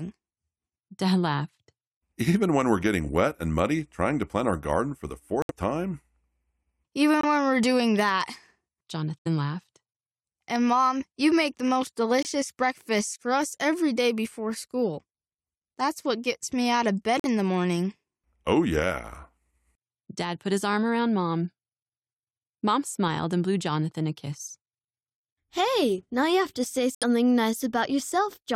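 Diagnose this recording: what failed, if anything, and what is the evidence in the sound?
Codec stage: corrupt frame muted. The speech drops abruptly to silence at 5.42–5.51, 7.21–7.24, 9.20–9.27, 12.23–12.27, 17.19–17.26 and 26.95–27.04 s. The decoder rejected damaged frames and the player filled them with silence, keeping timing intact.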